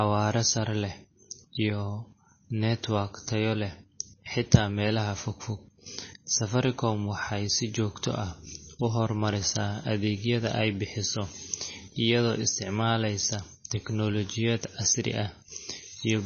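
Throughout, the speech sounds dull and watery, with nothing above 6.5 kHz and chirpy s sounds, likely from heavy MP3 compression at a bitrate around 24 kbps.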